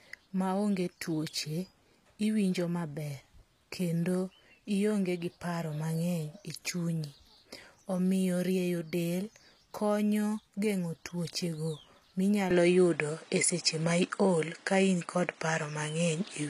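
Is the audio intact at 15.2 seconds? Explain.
No. Two faults are present at 15.2 seconds. Throughout the clip there is HE-AAC compression, likely at a low bitrate near 24 kbps. The treble is rebuilt by copying lower bands upward, so s sounds turn gritty and metallic. Nothing remains above 14.9 kHz.

From 12.51 seconds to the end, the input likely switched to a poorer device. There is no gap at the change. The new device cuts everything above 10.5 kHz, so the speech sounds duller and boxier. The level shifts by a few dB, and a new background noise floor sits well below the speech.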